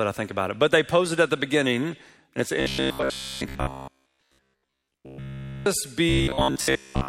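From 2.60 to 5.66 s, and 6.09 to 7.08 s, the sound becomes a rigid 66.7 Hz buzz. This is robotic sound from repeated short buffers, likely from 15 ms slices looping over most of the audio.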